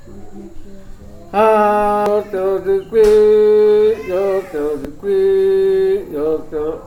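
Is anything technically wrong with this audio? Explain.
Yes. At 2.06 s and again at 4.85 s there is a brief glitch, a very short disturbance in the sound. This is damaged data in a compressed stream: corrupted bytes make the decoder misread a frame, lose sync and hunt for the next valid frame header.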